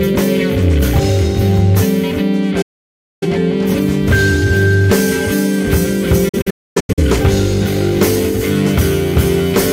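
The audio twice drops to silence after a quick 8 ms fade: a clean hole from 2.62 to 3.25 s, then broken gaps between 6.29 and 7.03 s, the longest 256 ms. This is digital broadcast dropout, the receiver muting while frames failed, so the missing programme is lost.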